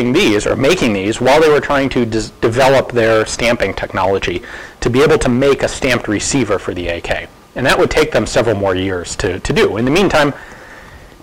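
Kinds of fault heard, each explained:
hard clipping: Peaks are driven about 20 dB past what one stage can pass. Around a tenth of the audio is cut flat, adding fuzz throughout.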